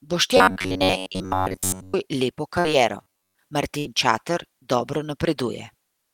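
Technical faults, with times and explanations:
0.37–1.95 s and 3.03–3.36 s, robotic sound from repeated short buffers: Audio likely arrived too seldom, so the player looped the last few milliseconds while most of the real speech was skipped. The loop sets a fixed 93.8 Hz buzz, which fits a repeated buffer of about 10.7 ms, so the speech becomes a rigid metallic drone.
2.59–2.68 s and 3.79–3.88 s, burst of packet loss: A run of packets failed to arrive in time, so the receiver extended the last sound for 51 ms and then 65 ms, fading it out. Playback then resumes 60 ms further on each time, leaving a skip after the held, decaying tail.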